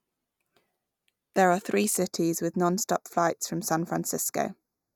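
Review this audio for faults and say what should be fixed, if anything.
From 1.97 s onward the speech goes hollow, that's channel delay comb filtering: one side lags a hair, so mono sum notches near 3 kHz. Worth fixing: time-align both channels before any mono fold-down and it won't happen.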